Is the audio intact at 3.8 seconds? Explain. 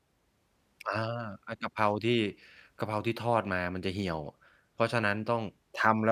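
Yes, the speech at 3.8 seconds comes through intact, with no dropout, click, distortion or other fault at that moment.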